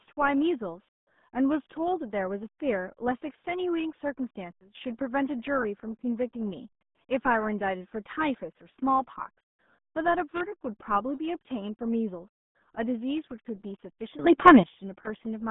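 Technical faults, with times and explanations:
Throughout: RealAudio 14.4 codec. The speech is confined to a narrow telephone-like band of roughly 150 Hz to 3.6 kHz, with nothing at all above 3.8 kHz. It sounds muffled, with a gargly texture. The damage is heavy and points to an 8 kbit/s dial-up speech codec, which keeps only a coarse model of the voice and discards the high band and much fine detail.
4.51–4.75 s and 14.19–14.63 s: sudden gain jump. At 4.51 s the level drops abruptly by about 16 dB and stays down until 4.75 s. At 14.19 s it leaps up by about 15 dB until 14.63 s. Both times the speech and the background noise shift together, with no fade in or out. That points to a digital gain change applied instantly between samples, likely a setting or bit shift switched without a ramp.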